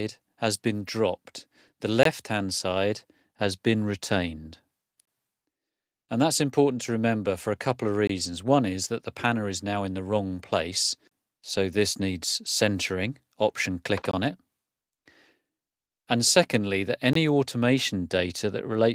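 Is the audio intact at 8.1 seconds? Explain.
No. A gap between chunks leaves 20 ms of silence from 8.07 to 8.09 s. The chunk join leaves a short hole.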